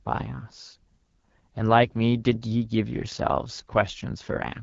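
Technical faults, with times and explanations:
Throughout, AMR wideband (HD Voice) codec: the speech has passed through a very low-rate HD Voice encoder, and the plainly audible damage fits one of its two lowest modes, around 8.85 kbit/s. At that rate the codec's model of the vocal tract and its pulse excitation are described too coarsely, so the speech below 6.4 kHz turns rough and raspy. The top band up to 7 kHz is only synthesised noise.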